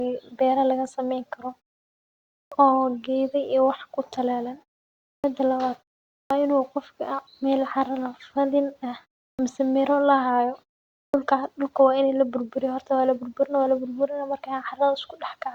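Speech with a clipped start after a pause at 2.47, 5.19, 6.25, 9.34 and 11.09 s: roughly 50 ms is swallowed each time, as before "oo geda" and "in uu qofka", because the output path sleeps during silences of 0.36 to 0.94 s and wakes late.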